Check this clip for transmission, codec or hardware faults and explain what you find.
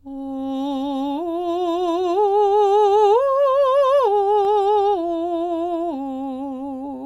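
One hardware fault is present in this music: CD scratch ticks. Three ticks fall between 4.27 s and 4.63 s, spaced evenly at roughly five or six per second. A scratch on the disc wipes out more data than error correction can rebuild. The damage comes round once per revolution. The player conceals each bad patch by interpolating or muting it. Each tick is a sharp, tiny click, well under a millisecond long.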